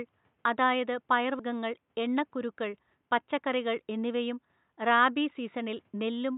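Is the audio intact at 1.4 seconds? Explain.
No. At 1.39 s compressed frames are skipped: a few 32 ms frames, about 150 ms of speech, never play, so the sound jumps ahead with an abrupt join. A spectrogram shows a sudden vertical discontinuity, and the waveform shows mismatched envelopes at the join.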